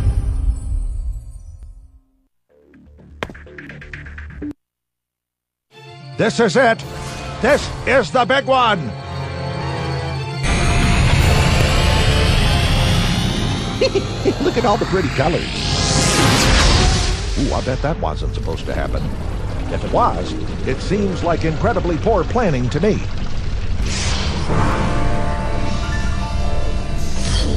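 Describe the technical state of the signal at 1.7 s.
A tiny skip at 1.63 to 1.67 s, where an overlap between stream segments cut about 40 ms at a segment boundary, making the waveform jump.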